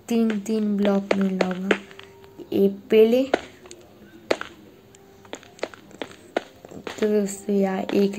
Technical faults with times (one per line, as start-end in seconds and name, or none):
none